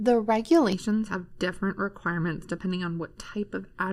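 From about 0.73 s to the end, the speech goes hollow and phasey: channel delay, or comb filtering. One channel lags the other by about 0.7 ms, so summing to mono cuts evenly spaced notches starting around 700 Hz.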